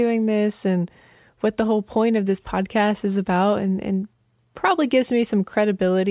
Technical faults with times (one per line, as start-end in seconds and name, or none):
none